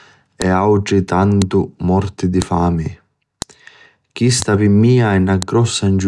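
Sharp clicks land at 0.42, 1.42, 2.42, 3.42, 4.42 and 5.42 s. Each is a file header played as audio. The stream is built from 1.0 s pieces, and each piece kept its WAV header. Those header bytes play as samples. The click before "morti di fami" at 1.42 s is one. So are those right after "morti di" at 2.42 s and after "morti di fami" at 3.42 s. Each is a brief, loud snap, unrelated to the speech.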